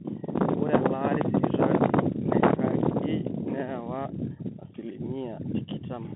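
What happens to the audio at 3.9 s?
At 3.9 s you're hearing the Bluetooth CVSD headset codec, which runs through the whole clip rather than just at that moment. It sends one bit per sample saying up or down with an adapting step, which fits a 64 kbps link. Speech sits in a narrow 150 Hz to 3.4 kHz band with nothing above 3.8 kHz, so it's muffled and boxy. S sounds come out scratchy, louder high-frequency bits distort, and there's a grainy hiss under the speech.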